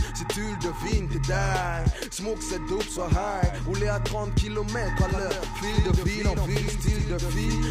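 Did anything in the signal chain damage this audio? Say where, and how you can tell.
Yes. From 5.01 s to the end, a doubled audio track appears, likely from a second, slower capture path or an edit holding two copies out of step. A full-band copy trails roughly a tenth of a second behind, around 5 dB quieter, starting abruptly with no decay or room colour.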